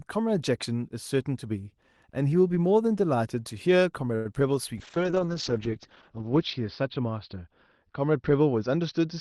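Around 4.15 s there's a short stall from a late packet. A packet turned up late, the jitter buffer ran dry, and the receiver held the last sound for about 99 ms until it arrived. Nothing gets lost, but that moment drags with a faint buzzy sustain, running to 4.26 s.

Right after, at 4.35 s, comes a short concealed packet loss. About 20 ms of audio never reached the decoder, and the receiver patched the gap by extending what came before it. You hear a tiny smear or wobble as it blends back into the real signal.

From 4.78 s to the end there's a call bitrate drop. The bandwidth estimate fell, and the roughness fits the Opus encoder going from around 32 kbps down to about 11 kbps. The top end also shrinks from 12 kHz to 6 kHz, so the sound turns muffled and a bit watery, worst for roughly a second and a half.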